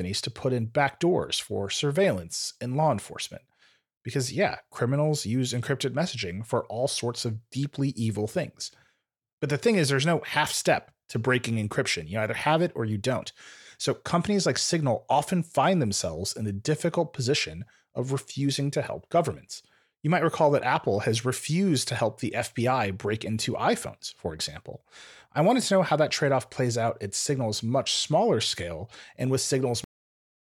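At 29.84 s, just after "smaller scale and with", the speech has a cut-off end. The final buffers were never written out, so the audio stops mid-sound and falls straight to digital silence with no natural decay, continuing silent to the clip's end.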